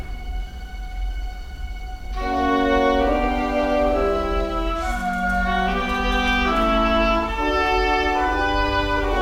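Music, with no audible technical faults anywhere in the clip.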